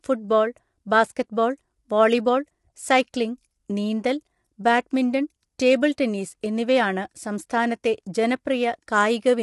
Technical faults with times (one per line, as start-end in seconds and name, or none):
0.00-9.43 low-delay AAC compression